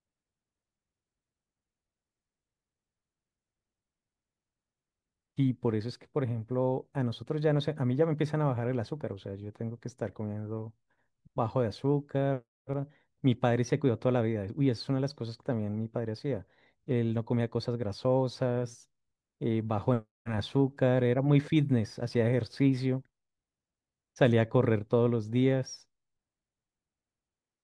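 A listener will find nothing technically wrong in this speech recording at any point.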